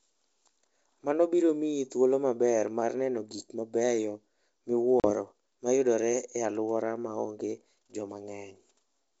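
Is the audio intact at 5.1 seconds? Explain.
No. At 5.00 s the call lost about two packets' worth of data, some 40 ms, to packet loss on an ADPCM call. The gap was filled with silence, and the decoder's adaptive predictor and step size drifted away from the sender's. The result is an abrupt, hard-edged hole. As the speech resumes with "ma yudore e alworano", it returns with some distortion until the decoder resynchronises around 5.13 s.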